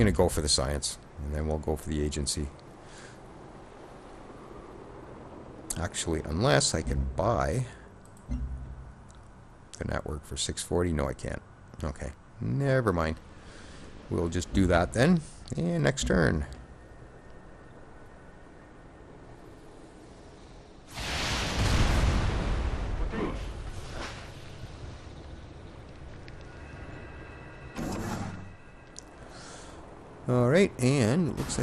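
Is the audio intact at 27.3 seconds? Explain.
No. At 27.3 seconds the sound carries the same MP2 compression damage heard across the whole clip: dull, with a gurgling, granular roughness. Too few bits for MPEG Layer II's 32 sub-bands are the likely cause, which fits a rate of about 80 kbps. Upper bands get switched off and the rest are coarsely quantised. A spectrogram shows a ragged top edge with high bands flickering on and off in blocks.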